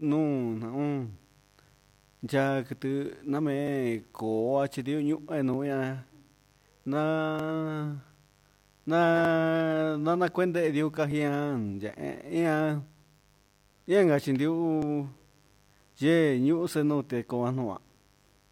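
Mains buzz runs under the speech from start to finish, sitting about 35 dB below it. Its base is the 50 Hz mains frequency, but the sound is rough rather than a pure hum. Sharp spikes are getting into the signal path twice per mains cycle, probably through a dimmer, a rectifier or a poorly shielded connection. Those spikes spread energy across harmonics of 50 Hz well into the kilohertz range, which gives a steady raspy buzz.

Clock drift buffer slips begin at 1.81 s and recur about every 1.85 s until 16.67 s, roughly ten times in all. Each one is a click or pop that cuts into the speech at a regular rhythm. The likely cause is two devices running on separate clocks that disagree by around 500 ppm. The buffer between them slowly fills or drains until a few dozen samples are skipped or repeated to catch up, and each catch-up produces one click.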